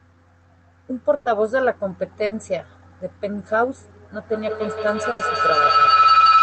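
At 1.15 s, 2.25 s and 5.11 s the speech hits a burst of packet loss. Audio arrived too late or not at all. The receiver stretched the last sound to cover roughly 100, 60 and 80 ms, giving a brief fading buzz or hiss, and then the speech jumps ahead.

From 4.16 s to the end, a feedback howl builds. Two devices in one room share the call, so each trip through microphone and loudspeaker adds gain. It narrows to a whine near 1.5 kHz, peaking about 7 dB above the speech, and pulses roughly every 150 ms.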